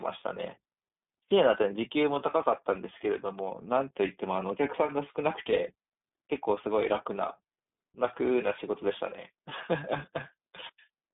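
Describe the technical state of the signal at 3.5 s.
At 3.5 s the speech sounds thin, boxy and somewhat rough and synthetic, with everything above about 3.8 kHz missing and the low end rolled off below roughly 200 Hz. This is iLBC codec damage, present throughout the clip. The codec codes each 30 ms frame's excitation independently of the previous one over a narrowband telephone-style channel, which fits its 13.33 kbps mode and leaves the plainly audible graininess heard here.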